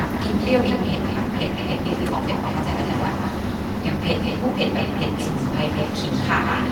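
Throughout the speech, an echo with no canceller is present: the far end's loudspeaker output is being picked up by its microphone and returned unremoved. Each phrase is trailed by a thinner copy around 150 ms later, sitting about 7 dB below the direct signal.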